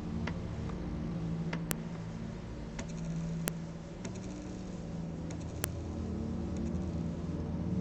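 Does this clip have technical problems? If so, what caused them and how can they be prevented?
Yes. There's a file header played as audio, heard as a sharp, loud click at 1.71 s, 3.48 s and 5.64 s. Each one is a brief snap that ignores whatever the sound is doing at that moment, which marks a spot where separate WAV pieces were joined or streamed one after another with their headers left in. Those few dozen header bytes get read as sample values and play out as a spike. To prevent it, strip each piece's header before concatenating or streaming, so only the sample data is passed through.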